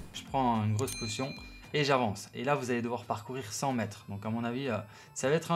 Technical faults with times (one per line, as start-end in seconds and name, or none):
0.00-5.55 switching supply whistle